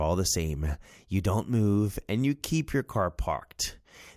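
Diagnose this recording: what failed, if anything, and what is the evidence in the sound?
Nothing failed; no fault is audible in this speech.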